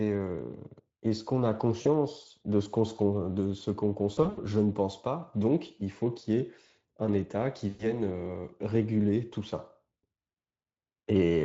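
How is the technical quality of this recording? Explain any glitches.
Four short dropouts break up the speech. Each is smeared over with a buzzy tone or coloured noise that fades rather than left silent. The cause is VoIP packet loss concealed by the speech codec, heard through a lightly compressed Speex stream.

At 1.81 to 1.87 s about 40 ms of audio is missing, and at 10.02 to 10.05 s about 20 ms. These gaps fit one or two lost 20 ms frames. At 4.13 to 4.39 s the losses are scattered across roughly 240 ms, with the longest hole near 80 ms. At 7.69 to 7.86 s about 100 ms drops out.

Each time, the decoder fills the gap by extending its last pitch and spectral shape at a falling level, which produces a stretched, buzzy tone or coloured noise that fades. Because each rebuilt frame feeds the next, the sound stays weak or distorted for a short while after the packets return.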